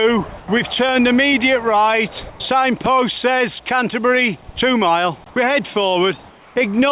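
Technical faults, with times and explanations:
0.38–0.48 s, 2.30–2.40 s, 6.30–6.56 s: comfort noise in place of the background. Real background gives way to flat, featureless hiss about 3–4 dB quieter, likely from discontinuous transmission during pauses.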